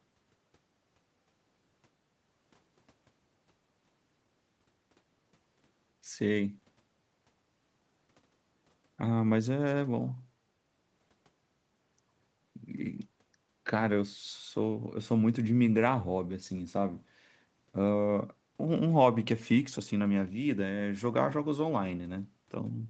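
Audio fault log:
No faults are present in this speech clip. The audio carries nothing above about 8 kHz, the wideband limit of the call microphone processing and the Opus call path, which fits a low bitrate near 20 kbps.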